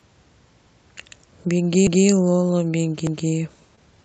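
At 1.87 s the audio stutters. From 1.87 to 2.07 s, a 200 ms stretch plays twice. The same thing happens again from 3.07 to 3.27 s. These are overlapping chunks. The audio was handled in blocks about 1 s long. Each new block began 200 ms before the previous one had finished, so that slice came out a second time. The joins fall about 1.2 s apart. That regular spacing gives the fault away. Each join is heard as a brief jump back and a repeat.

At 3.75 s there is a short concealed packet loss. About 20 ms of audio never arrived in time, and it was covered for roughly 17 ms, up to 3.79 s. The decoder carried the last sound forward to fill the hole. It then blended back into the real signal. The result is a tiny smear or wobble rather than a silent gap. Since the audio passed through an Opus call path, with the top end cut off at 8 kHz, this patching fits that decoder's built-in concealment.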